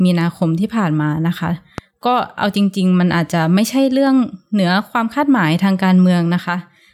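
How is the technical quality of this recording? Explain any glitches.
The recording has one glitch. At 1.78 to 1.81 s a single loud pop, about 10 dB above the speech, is likely a voltage spike from a plug, switch or static. Unlike a dropout, the speech carries on underneath without a gap.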